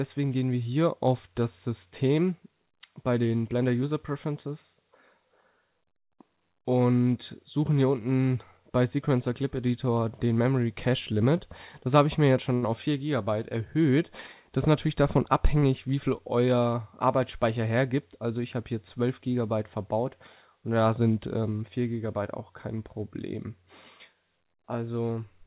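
Two short stalls from late packets interrupt the audio. At 12.54 s a packet arrived late, the jitter buffer ran dry, and the receiver held the last sound for 81 ms until the packet arrived. A second stall at 15.58 s lasts 40 ms. Nothing is lost, but the sound hangs briefly and everything after it runs later by that amount. On a waveform each shows as a stretch of flat, repeated-looking cycles. A spectrogram shows smeared horizontal streaks where the spectrum freezes.

From 14.18 s to 16.19 s, one channel lags the other by about a single sample before the two are summed to mono, causing channel delay (comb filtering). Such a tiny offset puts the first notch somewhere around 20 kHz, far above the call path's G.711 A-law ceiling of 4 kHz. Within the audible band, then, the effect is a gentle dulling of the upper range rather than a strongly hollow sound. A spectrogram shows slightly weaker top frequencies across that window.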